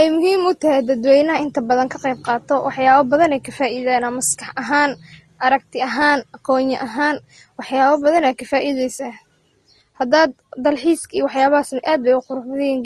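Throughout the speech, the audio appears to have been encoded by one lossy codec and then re-encoded by another, most likely Vorbis at around 33 kbit/s followed by Opus at around 32 kbit/s. This is transcoding between lossy codecs. The second encoder wastes bits on the first one's artefacts and adds its own artefacts on top. Nothing survives above 12.2 kHz, leaving a dull, doubly processed texture from start to finish.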